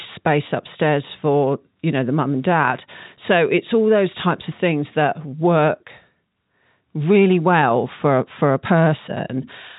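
No technical faults occur at any point in the speech, which comes through G.711 A-law telephone coding with nothing above 3.8 kHz.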